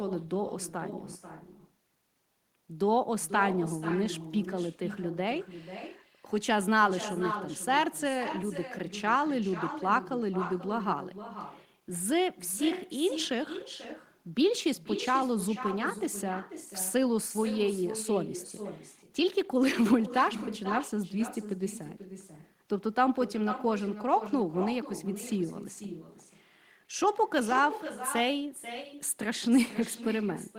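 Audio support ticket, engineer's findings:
Echo with no canceller throughout: speech shadowed about half a second later by a thinner copy, about 12 dB down. Far-end loudspeaker pickup returned uncancelled.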